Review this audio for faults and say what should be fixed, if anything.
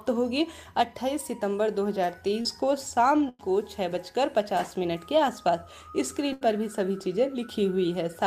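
At 2.41 to 2.47 s there is a short concealed packet loss. About 40 ms never arrived. The decoder extended the preceding sound, leaving a brief smear.

Two bursts of packet loss occur, at 3.29 to 3.41 s (100 ms) and 6.33 to 6.43 s (80 ms). The last sound is held and faded, then audio resumes with that stretch gone.

To prevent both, enable forward error correction and give the jitter buffer more headroom, so late or lost packets can be recovered instead of concealed.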